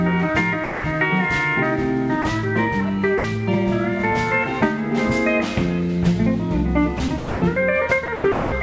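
Sound dropped by the voice detector at 0.64 to 0.84 s, 2.22 to 2.24 s and 3.18 to 3.24 s: the sound gives way to steady synthetic noise for 200, 20 and 60 ms. The likely cause is the sender's detector mistaking the quieter passages for background and stopping transmission, with the receiver filling each gap with comfort noise.

Sound chopped by the voice detector at 6.98 to 7.42 s and 8.06 to 8.52 s: the audio turns choppy, with about 280 and 300 ms lost. This is likely because the detector toggled repeatedly between sending and muting, with comfort noise covering each muted stretch.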